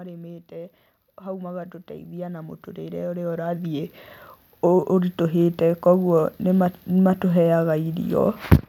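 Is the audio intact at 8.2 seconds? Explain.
Yes, the audio is intact at 8.2 seconds, with no audible fault at that moment.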